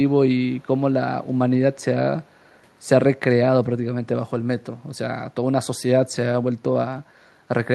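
Echo leak, from 2.24 to 2.55 s in this speech clip: a very faint copy of the voice returns about 279 ms behind the original. The likely cause is a far-end echo canceller failing to fully remove its loudspeaker's sound from its microphone, so the remainder was sent back.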